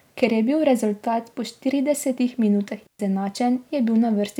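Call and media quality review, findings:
Digital wireless dropout, 2.87 to 2.99 s. Clean hole of near silence in the speech, about 126 ms long. No noise burst before or after, very short fade at the edges. Probable component: digital wireless link. Receiver lost too much data and muted.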